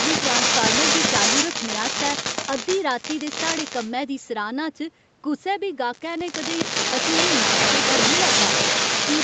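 A loudspeaker-side echo canceller likely failed to remove its microphone pickup, causing echo leak: a copy of the speech about 0.41 s late, louder than the talker from 0.0 to 2.82 s and 6.26 s to the end, quieter from 3.02 to 3.91 s.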